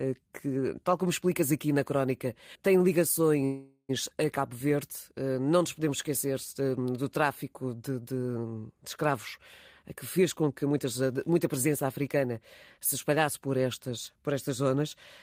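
At 3.45 s the speech stalls for about 0.45 s in what sounds like a call audio freeze. Packets were likely held up and the jitter buffer ran dry, so the last sound is stretched into a fading buzz or hiss, with about 40 ms of silence. Then the speech picks up where it stopped, now running about 435 ms later.

From 9.83 to 13.47 s there's a jitter buffer speed-up. With too much audio queued, the receiver snips out tiny pitch-period chunks over and over, around 400 ms in total, so the speech plays at about 111% speed with unchanged pitch and sounds a bit rushed.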